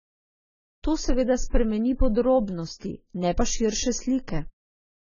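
AAC compression runs throughout: nothing survives above 7 kHz, and sibilants sound dull, smeared and warbling, likely from AAC-LC coarse quantisation at roughly 16 kbps.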